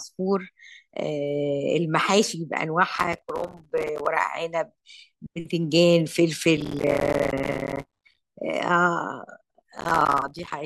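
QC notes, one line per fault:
2.96–4.06 s, 6.57–8.18 s, 9.78–10.53 s: processor overload crackle. Many short buffers, likely about 5 ms, miss their deadline. Each gap clicks, so the speech sounds gritty.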